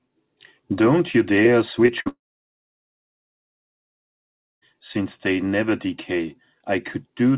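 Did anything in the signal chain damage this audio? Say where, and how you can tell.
Yes. The damage sits in the network stage of a call path. At 1.86 s there is a short concealed packet loss: about 20 ms of speech arrives too late for the decoder, and the receiver bridges the hole by extending the preceding sound before blending back in. It shows up as a brief smear or wobble lasting to about 1.90 s, with a short consonant at that point possibly lost.

From 2.00 to 2.08 s there is a burst of packet loss, about 60 ms in total. Concealment stretches the last received sound across the gap and lowers its level as it goes, so a voiced sound turns into a held buzz and an unvoiced one into a fading hiss. The speech then picks up further on, and the stretch in between is gone.

Straight after that, from 2.08 to 4.74 s, about 2.5 s of audio is missing, most likely from a long network dropout. The first fraction of a second carries a decaying concealment tail. 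After that, about 2.4 s is near-silent. Speech comes back at 4.74 s without the lost content. Because the G.711 path cuts everything above 4 kHz, the tail and the resumed audio are band-limited like the rest of the clip.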